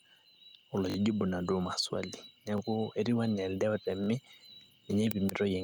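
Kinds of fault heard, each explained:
Gain pumping: The gain rises and falls, a breathing swing of about 5 dB that runs through the whole clip. Loud and quiet syllables sit unnaturally close in level, so the speech sounds squashed. The likely cause is input gain set too high for the microphone, with a fast compressor or limiter clamping down on each loud moment and releasing in the gaps.
Repeated buffer: Three short stutters break the speech, each a tiny slice of sound replayed back to back with a hard join at every repeat. The longest runs from 0.90 to 0.96 s, another from 4.04 to 4.08 s, and the shortest is at 2.58 s. The repeated slice fits a 20 ms buffer. Fresh audio arrived too late, so the playback device played the previous buffer again. The speech then continues without a gap.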